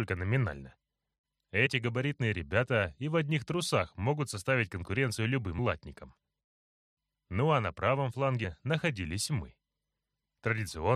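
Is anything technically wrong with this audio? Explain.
Yes, there are compressed frames skipped at 1.65 and 5.58 s. Each drops roughly one 23.2 ms frame, so the sound jumps ahead by about 20 ms.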